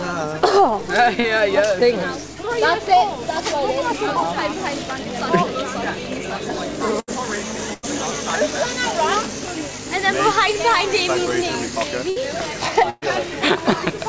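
At 1.20 s there's a short concealed packet loss: about 40 ms never arrived in time, so the receiver stretched the preceding sound to cover the hole and blended back in. You hear it as a quick smear or wobble, and a very brief sound could disappear.

After that come bursts of packet loss at 7.00, 7.74, 12.10 and 12.90 s, with roughly 80, 100, 60 and 120 ms missing. Each time the last sound gets held as a buzz or a hiss that fades, then playback jumps ahead with that stretch gone. The top end stops at 8 kHz, which fits a wideband call codec like G.722.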